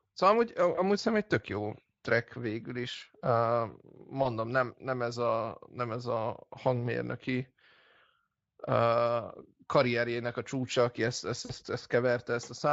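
At 0.75–0.80 s, 4.23–4.26 s (just before "nem nem ez a") and 11.45–11.52 s (after "csúcsa aki ezt ezt"), the Speex speech briefly stretches and fades. This is VoIP packet loss concealed by the speech codec. The decoder stretches its last pitch and fades it. The gaps fit one, one and two lost 20 ms frames.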